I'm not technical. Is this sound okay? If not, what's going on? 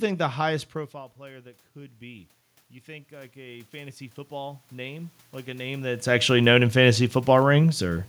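No. From 3.08 to 6.09 seconds there is automatic gain rising. The input got quieter, so the recording gain slowly turned itself up. The voice and the room noise swell louder together over three seconds, starting just before "actually known in fantasy".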